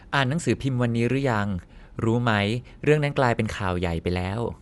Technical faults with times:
0.00-4.62 Dolby Digital compression

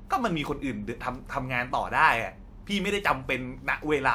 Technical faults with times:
none

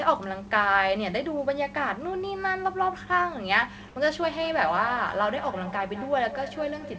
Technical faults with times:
3.88-3.96 comfort noise in place of the background
4.30-6.99 feedback echo between two devices

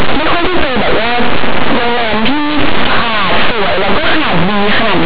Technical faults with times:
0.00-5.06 linear audio read as companded

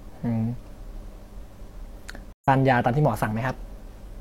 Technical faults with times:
2.33-2.48 stream reconnect

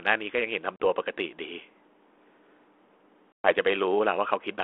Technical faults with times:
0.76-0.86 packet loss on an ADPCM call
3.32-3.51 packet loss on an ADPCM call

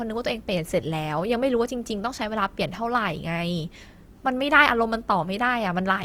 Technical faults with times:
0.00-6.05 Opus compression

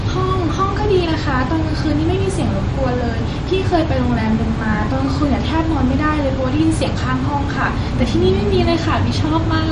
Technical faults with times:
0.00-9.71 MP3 compression

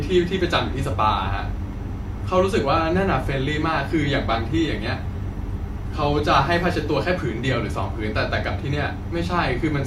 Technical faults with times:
4.23-6.23 adaptive stream at a lower bitrate

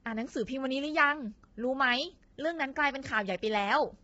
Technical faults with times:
0.00-4.03 low-delay AAC compression

